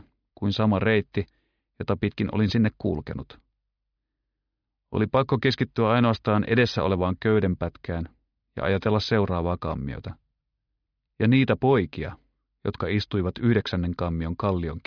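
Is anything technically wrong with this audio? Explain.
No, nothing technically wrong can be heard anywhere in this audio.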